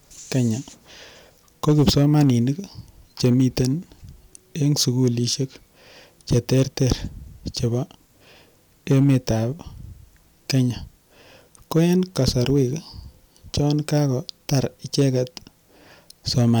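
Speech, hard-clipped throughout: a stage was overdriven by about 10 dB, flattening the tops of under one percent of samples and leaving harsh crackle on the peaks.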